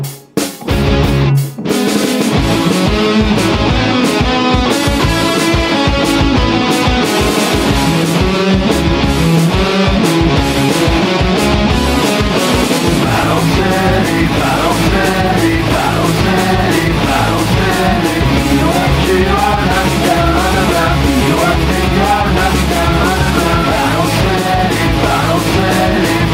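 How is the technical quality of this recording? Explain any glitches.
The technical quality of the recording is sound, with no glitches to explain.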